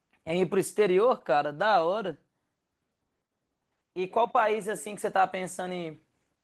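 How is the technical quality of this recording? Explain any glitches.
No glitches are audible anywhere in this recording.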